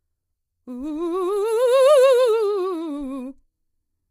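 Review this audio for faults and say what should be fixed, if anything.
Throughout the music, low-delay AAC compression damage is heavy: tones sound rough and grainy, with noise filling the gaps between harmonics, and nothing is present above 19 kHz. The likely cause is AAC-ELD at a rate that fits 24 kbps. Its short frames, around 10 ms, cannot separate closely spaced harmonics, so quantisation noise spreads across them and the bit budget runs thin. To prevent this, encode music at a substantially higher bitrate or use a standard-delay AAC profile when low latency is not needed.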